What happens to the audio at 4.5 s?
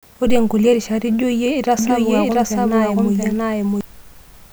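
Nothing goes wrong at 4.5 s; the audio runs through that moment intact, with no dropout, click or distortion.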